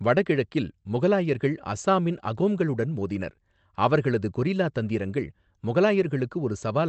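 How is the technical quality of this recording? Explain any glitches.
The recording has no glitches to explain. The speech has the character of a call codec path working as intended, with its content limited to roughly 8 kHz and below.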